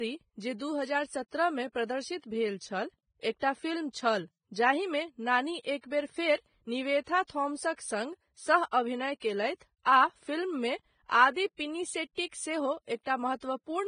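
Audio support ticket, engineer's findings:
Hissy, grainy treble and smeared consonant attacks across the full speech clip; likely Vorbis compression, heavy, consistent with a bitrate near 20 kbps. Coarse residue quantisation turns high-band detail into noise. Spectrogram: hard ceiling at 9.7 kHz, speckled blotchy texture beneath it.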